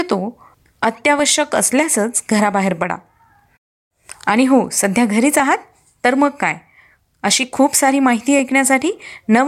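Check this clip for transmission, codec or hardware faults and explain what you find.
Clock drift buffer slips: two devices likely run on clocks roughly 500 ppm apart, so the buffer between them drifts until a small block of samples is dropped or repeated. From 0.60 to 9.0 s, this puts a regular click into the speech every 0.6 s.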